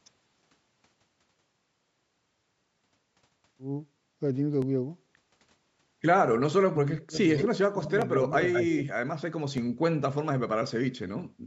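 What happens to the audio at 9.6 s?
At 9.58 s there is a single sharp click in the speech, a thin vertical line across the spectrum. The likely cause is dropped samples: about 0.7 ms of the stream goes missing, so the waveform jumps abruptly to a later value without removing any audible sound.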